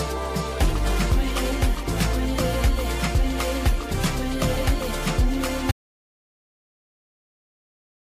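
At 5.72 s the sound stops abruptly and never returns. This is an audio dropout to silence, running from there to the end of the clip. The gap is silent, with no room tone or noise floor underneath. The cut comes mid-flow rather than at a natural pause. The likely cause is a lost input, such as a disconnected device, a failed link or an accidental mute, while recording continued writing silence.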